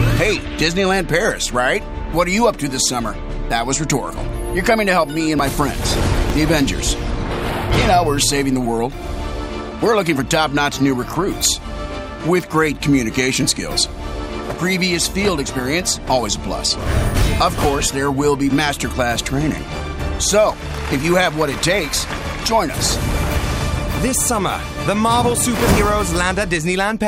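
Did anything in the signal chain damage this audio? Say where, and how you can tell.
Yes. At 4.11, 5.39, 6.30 and 23.97 s the sound jumps ahead by roughly 10 to 30 ms, with no silence. This is likely a dropped buffer (overrun) in the driver. Overwritten samples were lost, and the edges were spliced together.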